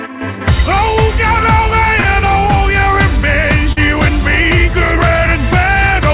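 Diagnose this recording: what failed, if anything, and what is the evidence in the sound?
Packets were lost on the network leg of the call: at 2.0 s and again at 3.72 s, about 40 ms of audio never reached the decoder in time. This is short concealed packet loss. The receiver bridged each gap by extending the preceding sound for roughly 40 ms before blending back, heard as a brief smear or wobble, all within the 4 kHz band of the G.711 path.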